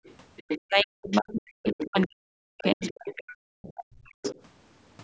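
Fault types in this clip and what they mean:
Other side's voice leaking through: A second, fainter voice surfaces in short scraps throughout the clip. This is likely loudspeaker echo that the echo canceller failed to remove from the microphone. It appears seven times, each lasting a fraction of a second, from the very start to about 4.4 s. The faintest scrap sits far below the talker, roughly 35 dB down. The strongest come up to only about 10 dB below.
Speech suppressed in double talk: From about 0.7 s to 4.2 s the talker's voice keeps dipping and dropping out in pieces. This is likely the echo canceller turning everything down while both sides talked at once, because it could not tell the talker from the echo. Around three seconds of that stretch is affected. At its deepest the voice falls by about 40 dB, close to silence, while the other side's scraps carry on.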